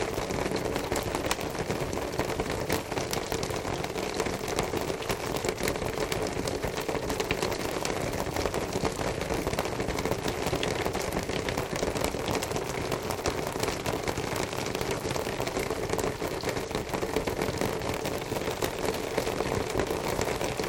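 Integer overflow cracks hit at 1.31, 2.73, 4.59, 5.68, 12.05 and 18.65 s: loud peaks wrap to the opposite sign instead of limiting, giving sharp snaps.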